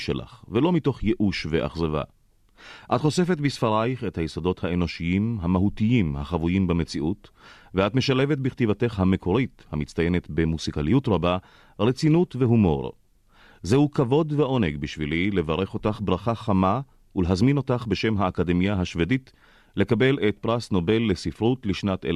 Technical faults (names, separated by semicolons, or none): none